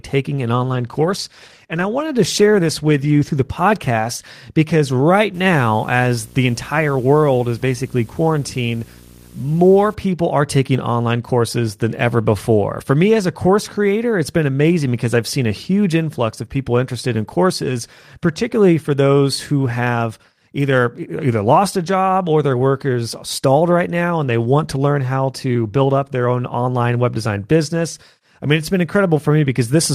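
A speech recording with two separate faults in its first ten seconds. From 0.6 to 4.91 s there is a call bitrate drop. The connection's bandwidth estimate fell, and the encoder cut its rate from 32 to 18 kbps. Coarser coding makes the voice sound rougher and watery. The high end loses some air. The worst stretch lasts about 2.25 s before quality climbs back. From 5.34 to 9.94 s, ending just before "people are taking online", a video or display buzz sits under the speech. A screen or video cable is coupling into the audio path. It produces a 60 Hz buzz at the picture's field rate, with a hashy edge above it. The buzz is faint, roughly 25 dB below the speech.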